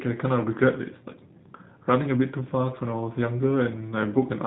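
From start to finish the speech carries the sound of the G.729 codec, plainly audible. Each 10 ms frame is rebuilt from a vocal tract filter, a pitch predictor and a few pulses, which fits an 8 kbit/s stream, so the voice turns slightly rough and synthetic. Nothing passes above 3.8 kHz. A simple low-pass filter would only dull the top end, but here the buzzy, resynthesised texture gives the codec away.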